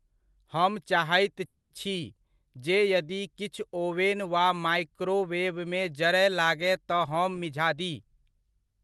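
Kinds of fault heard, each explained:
Call audio freeze: Just after "हम चाहैत", from about 1.45 to 1.72 s, the last sound is stretched into a fading buzz or hiss lasting about 250 ms, including about 60 ms of silence at the end. The speech then resumes exactly where it stopped. The likely cause is delayed packets draining the jitter buffer. Unlike a packet-loss dropout, nothing is skipped: the gap is inserted, and the delay grows by about 250 ms.
Jitter buffer speed-up: From about 7.43 to 8.81 s, the speech runs at about 110% of normal speed and sounds hurried, but its pitch stays the same. The receiver is trimming a buffer that has grown too full by repeatedly cutting out pieces one or a few pitch periods long, roughly 150 ms in total. A resampling speed-up would raise the pitch, and loss concealment would leave audible gaps or smears rather than this smooth acceleration.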